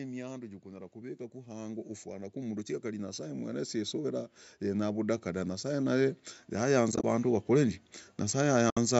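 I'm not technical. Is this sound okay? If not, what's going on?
No. Automatic gain rising runs from 0.41 s to 7.78 s: the call's volume control judged the speech too quiet and kept turning it up, so the voice and the background noise behind it grow steadily louder together over those seven seconds.

AAC frame loss with muting occurs twice, at 6.92 to 7.04 s and 8.70 to 8.77 s. Short pieces of the compressed stream went missing, and the player filled them with silence, fading out and back in smoothly, leaving soft gaps.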